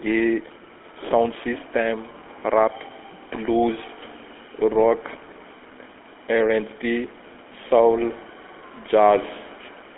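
A speech clip with a buzzy, gravelly roughness and a thin, boxed-in tone throughout, with plainly audible codec damage and nothing above 3.7 kHz. This is the GSM full-rate codec, which fits a 13 kbps phone link: pulse-driven vocal-tract modelling inside a 300 Hz to 3.4 kHz telephone band.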